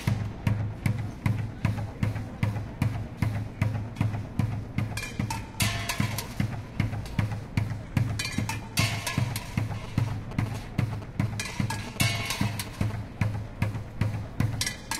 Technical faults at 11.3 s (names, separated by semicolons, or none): GSM signalling bursts